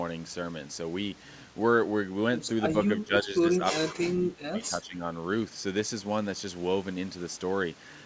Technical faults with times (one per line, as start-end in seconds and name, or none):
2.76-5.04 speech suppressed in double talk